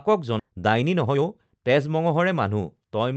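At 0.39 s there is a skip ahead. Roughly 0.7 s of speech is lost at once, and playback jumps straight to later audio that was already queued, with no silence or fill at the join. Unlike a dropout or packet-loss concealment, there is no gap, hiss or smeared tone to hear. The sound on either side simply butts together. The listener's delay shrinks by about the same amount.

From 0.50 s to 2.60 s, jitter buffer speed-up follows as the receiver works off its excess backlog. It repeatedly trims short pitch-period-sized pieces, about a third of a second in total, so the speech runs at 113% of normal pace and sounds hurried while pitch stays put. Unlike the single abrupt jump before it, this is a sustained, even rush rather than one audible cut. Throughout, the band-limited sound, topping out near 8 kHz, fits an Opus call path.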